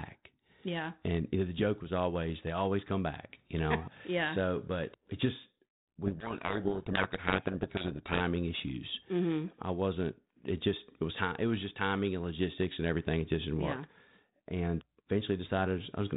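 From 6.06 to 8.21 s, just after "but it just", a codec payload misread buries the speech in harsh distortion. The G.726 code words are unpacked in the wrong bit order, so the decoded differences are wrong. The spectrogram shows dense broadband noise up to the 4 kHz limit, and the waveform turns ragged until it clears.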